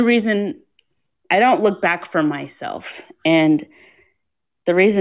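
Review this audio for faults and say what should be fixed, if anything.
No faults turn up in this audio, so nothing needs to be fixed.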